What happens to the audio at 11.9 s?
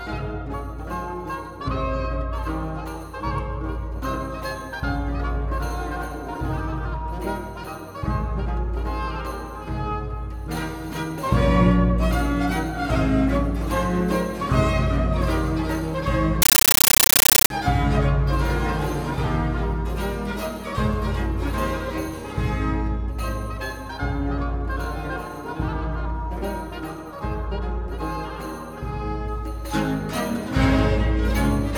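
Nothing goes wrong at 11.9 s; the audio runs on intact through that moment with no audible fault.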